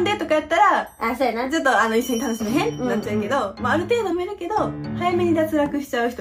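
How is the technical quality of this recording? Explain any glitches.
The recording has two audible glitches, both from compressed frames skipped. At 2.40 to 2.42 s and again at 4.11 s, the sound jumps ahead. Whole compressed frames were never played because they were missing or rejected as damaged: roughly one frame, about 20 ms, at the first point, and a few frames, about a tenth of a second, at the second.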